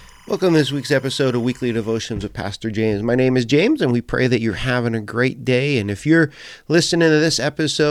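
From the start to 2.0 s, timecode bleed sits about 30 dB under the speech: 25-frame linear timecode leaking from a neighbouring line, flipping between roughly 1 kHz and 2 kHz. Unlike a steady whine or mains buzz, it warbles and chirps continuously.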